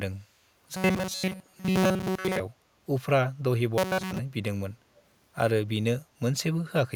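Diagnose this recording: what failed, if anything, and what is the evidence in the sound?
The speech turns into a rigid, metallic buzz at a fixed pitch of 188 Hz from 0.77 to 2.40 s and again from 3.78 to 4.19 s, loosely tracking the syllables. This is robotic sound from repeated short buffers, likely at the driver or buffer stage. New audio arrived too late, so a segment about 5.3 ms long was replayed for most of each stretch while real audio was dropped.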